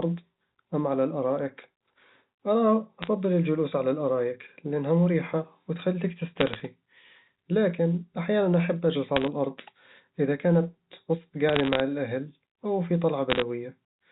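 Bit errors on a digital phone line crackle in short bursts at 3.03–3.07 s, 6.40–6.62 s, 9.16–9.28 s, 11.49–11.80 s (after "الأرض إذا كنت وسط") and 13.30–13.42 s. Flipped bits in the mu-law samples, at a fraction of a percent, leave sharp ticks over the intact speech.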